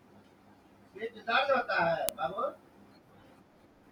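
At 2.09 s, two separate WAV pieces meet with the second piece's file header left in, so its few dozen header bytes play as samples. That is the fault of a file header played as audio, heard as a sharp, loud click.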